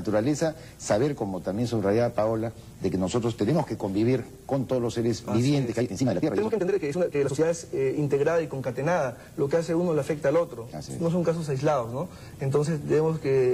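From 5.64 to 7.46 s there is a time-stretched section, likely caused by software compressing that stretch to fit a shorter length. It ran the material at about 1.94 times its original pace and held the pitch steady by discarding short slices and butting the remainder together. The sound suddenly rushes forward at unchanged pitch, then snaps back to its normal pace at 7.46 s.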